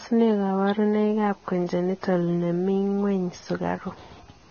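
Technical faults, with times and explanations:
Throughout, Vorbis compression: the speech sounds hissy and grainy. Nothing is heard above 6.5 kHz, so the top of the sound is cut off. Consonant attacks are smeared, and voiced tones are roughened. The likely cause is heavy Vorbis coding at a very low bitrate, consistent with roughly 17 kbps. The codec keeps a smooth spectral outline but quantises the fine detail so coarsely that it turns into noise of similar energy.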